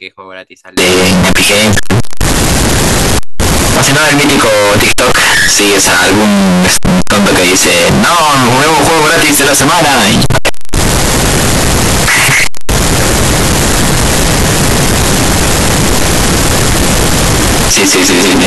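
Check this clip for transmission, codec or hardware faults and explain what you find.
From 0.77 s to the end, the speech turns extremely loud and harsh, almost square-wave buzz at an almost fixed, high level, with background noise as loud as the voice, though pitch stays traceable. This is likely float read as integer: 32-bit float samples interpreted as 32-bit integers.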